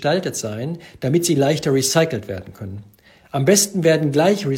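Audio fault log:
No technical faults can be heard in the signal at any point in the clip.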